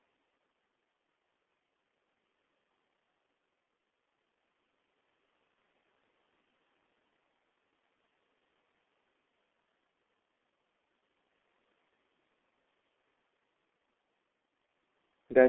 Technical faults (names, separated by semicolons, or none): G.723.1 codec